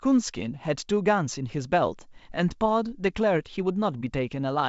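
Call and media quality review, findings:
Nothing stood out on listening to the speech over the G.722 wideband path at 64 kbit/s.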